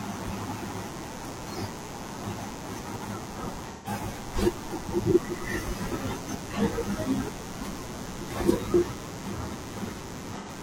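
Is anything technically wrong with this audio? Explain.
Yes, there are two faults. A steady, raspy mains buzz runs through the whole clip, sitting fairly loud against the speech. Sharp switching spikes twice per cycle of 60 Hz mains have leaked into the signal path, spraying harmonics of 60 Hz up into the kilohertz range.

At 3.72 to 3.88 s and again at 10.37 to 10.49 s, the speech turns briefly smeared and phasey. This is AAC frame loss with concealment. Frames went missing, and the decoder patched each gap from the last good spectrum. The first gap fits about three lost frames, the second about two.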